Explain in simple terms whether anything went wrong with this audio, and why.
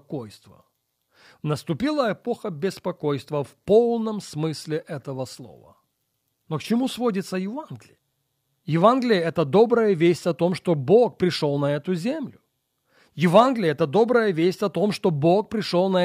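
Nothing went wrong here; no faults can be heard.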